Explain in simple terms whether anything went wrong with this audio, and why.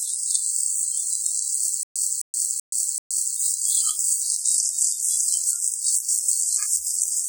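Two things went wrong. The recording was most likely squeezed hard by a WMA compression encoder, which stores sound in long blocks and throws away detail it judges unimportant, here quite aggressively. The result is heavy damage throughout: sounds ring and smear in time, quiet detail turns washy, and a hiss rises and falls along with whatever is playing. Nothing above about 18.3 kHz remains.

The playback also stalled from about 1.83 s to 3.36 s, likely because the player kept running out of data and retrying. Each time it replayed the last fragment it had, roughly a quarter of a second long, then fell completely silent for about an eighth of a second. This stutter with silent gaps repeats the same burst four times, every 0.38 s, and whatever sound belonged in that stretch is lost.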